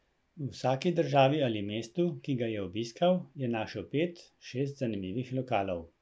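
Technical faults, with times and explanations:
No technical faults can be heard in this speech recording. Nothing in the audio calls for a time or an explanation.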